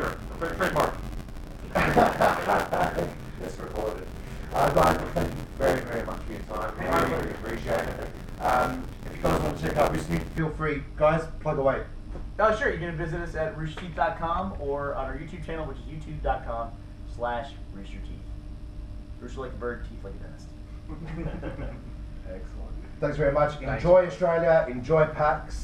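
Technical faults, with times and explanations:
0.0 to 10.39 s, buffer tearing: a continuous robotic buzz at about 86.1 Hz rides on the sound. The writing program and the hardware reading the ring buffer have slipped, so roughly a third of each period replays audio around 40 ms old, with hard joins on both sides. The buzz rate fits a 512-sample buffer.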